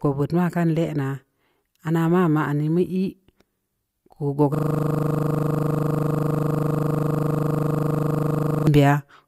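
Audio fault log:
4.55–8.67 s, system hang loop: a 40 ms slice of the speech repeats exactly, over and over, for about four seconds, giving a rough stutter at 25 Hz. The driver froze while the hardware kept replaying its ring buffer, which fits a 40 ms buffer. The repeats are identical, with none of the variation of a dropout or glitch.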